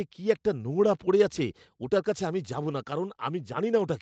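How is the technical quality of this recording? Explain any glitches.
No glitches are heard anywhere in this speech recording.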